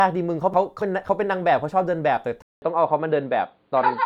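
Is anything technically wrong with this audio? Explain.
Yes, there are two faults.

Frames out of order, from 0.54 to 1.09 s. Two neighbouring blocks of about 279 ms each were decoded in swapped order, a size that fits three frames per block. The second half of that stretch plays before the first, so the speech turns into a garbled flutter. No time goes missing; the material is simply rearranged.

Input switched to a poorer device, at 2.42 s and lasting to the end. A 200 ms silence marks the change, after which the audio stops dead above 4.7 kHz and sounds dull and boxy. The level stays roughly the same, and a faint new background noise sits far below the speech. This abrupt narrowing of the band with a gap at the join is most likely the recording switching its input mid-stream.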